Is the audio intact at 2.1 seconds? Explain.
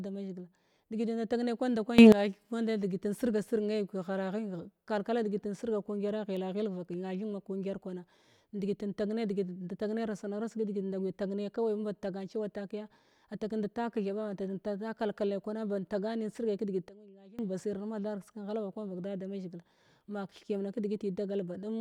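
No, a sudden gain jump runs from 1.98 to 2.12 s, likely from a gain change applied without a ramp. The speech and background noise leap up together by about 17 dB; the waveform steps abruptly taller, and the spectrogram brightens across all frequencies at once.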